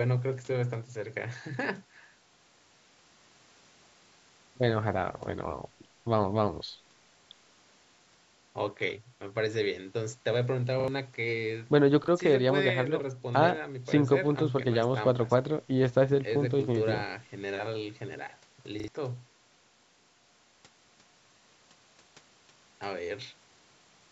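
At 10.8, 12.04 and 18.8 s, a repeated buffer causes a brief stutter. New audio arrived late, so the last 40 ms piece played again: twice at 10.8 and 18.8 s, once at 12.04 s. Each repeat joins hard. Roughly 40 to 70 ms of sound goes missing.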